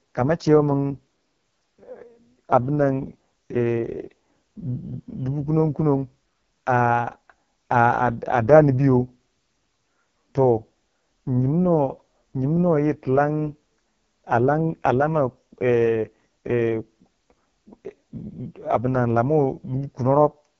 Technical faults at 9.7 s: AMR wideband (HD Voice) codec

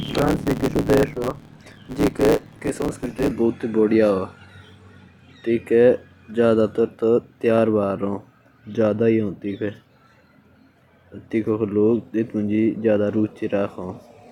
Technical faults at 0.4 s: block size mismatch (truncated)

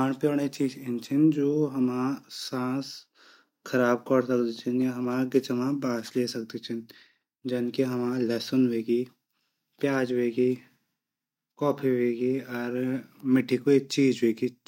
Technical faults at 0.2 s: none

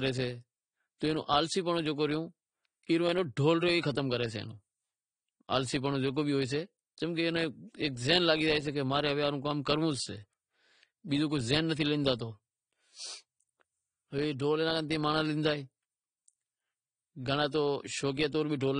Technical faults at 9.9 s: AAC compression

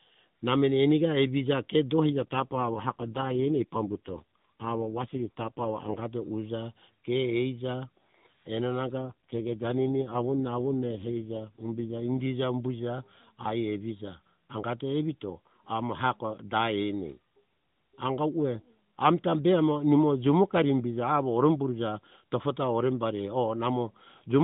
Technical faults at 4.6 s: AMR rate drop

